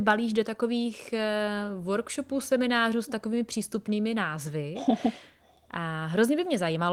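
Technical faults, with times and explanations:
Nothing in this speech recording stood out as a technical problem on listening.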